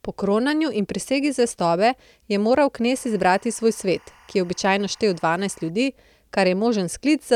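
From 2.95 to 5.70 s, just after "prisegi zvestobe je moral", timecode bleed chirps faintly under the speech, roughly 30 dB down. Linear timecode is leaking from a nearby track or cable, flipping between about 1 and 2 kHz. Unlike a steady whistle, it warbles rhythmically, fitting 24-frame code.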